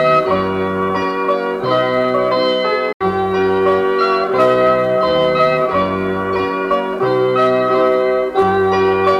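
At 2.92 s the sound cuts out and stays silent until 3.03 s, then picks up further along, as though it kept playing underneath. That gap is likely a Bluetooth dropout, where packets reached the headphones too late and were discarded.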